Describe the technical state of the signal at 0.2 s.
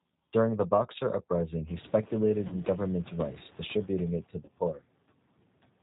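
At 0.2 s the speech already sounds narrow, with a rough, synthetic edge and no brightness above 4 kHz. That is the G.729 codec, present through the whole clip. It runs at 8 kbit/s and rebuilds each 10 ms frame from a vocal tract filter, a pitch predictor and a handful of pulses rather than the actual waveform, so the damage is plainly audible and the top of the spectrum is simply gone.

At the same moment, the background noise sinks between the words and rises under them. These are noise suppressor artifacts, also present for the full length of the clip. The suppressor estimates which frequency bands hold steady noise and pulls them down frame by frame, here by about 21 dB. The leftover noise swings up and down with the speech. The room noise is still low at this point, before it rises at around 1.5 s.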